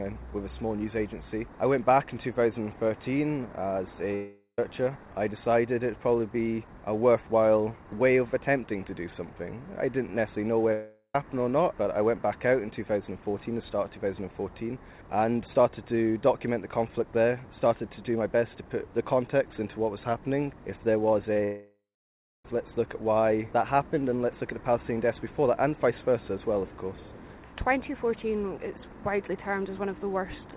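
At 4.15 to 4.59 s and again at 10.73 to 11.15 s, the sound is stretched into a fading buzz for roughly four tenths of a second, with a brief silent tail, then resumes further on with material missing. This is likely a long network dropout. Unlike a short loss, the fill outlasts what a receiver can disguise and decays audibly. Two short concealed packet losses follow at 21.33 to 21.36 s and 21.37 to 21.39 s, each a tiny smear or wobble lasting only hundredths of a second, with the audio blending straight back rather than fading. They lead into what is likely a third dropout from 21.44 to 22.45 s, where about a second is lost and the last 0.63 s is silence. Throughout, the narrowband call path cuts everything above 4 kHz, consistent with G.711 A-law at 64 kbps.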